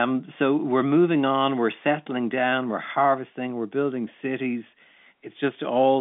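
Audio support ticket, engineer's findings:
No faults found.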